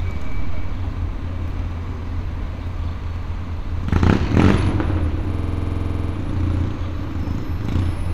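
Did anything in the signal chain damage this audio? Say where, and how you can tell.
Yes, at the driver buffer. A system hang loop runs from 5.34 to 6.13 s. A frozen ring buffer replays one 46 ms slice as a 21.5 Hz stutter.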